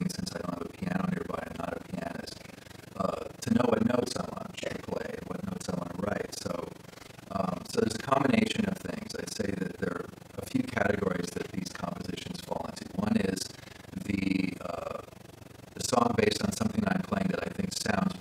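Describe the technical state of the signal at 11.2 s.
At 11.2 s the signal carries overlap-add ripple, and it runs through the whole clip rather than starting or stopping there. The audio was split into windowed frames and rejoined with an overlap that does not add up to a steady gain. So the level dips once per frame, around 20 times a second. The dips are deep, about 60 dB. The result is a fast, rough flutter, like a rough tremolo chopping the sound.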